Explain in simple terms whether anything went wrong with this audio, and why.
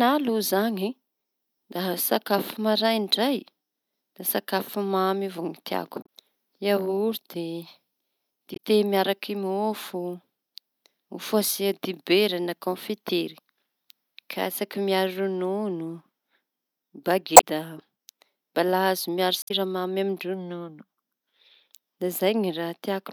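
Four short glitches break into the speech, at 6.02, 8.53, 17.33 and 19.41 seconds. They come from damaged data in a compressed stream. Some stored bytes were wrong, so the decoder misread those frames and briefly lost its place. Each fault lasts about a tenth of a second or less.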